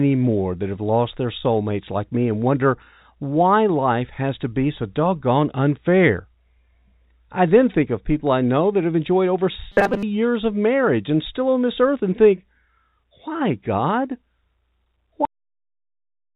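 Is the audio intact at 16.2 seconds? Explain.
No. At 16.2 s the clip is inside a cut-off end. The speech stops abruptly at 15.25 s and the audio falls straight to digital silence with no decay. The final buffers were never written or played, so the recording ends mid-sound.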